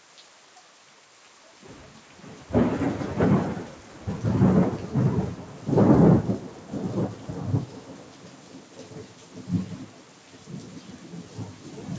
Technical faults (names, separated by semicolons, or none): noise suppressor applied to music or sounds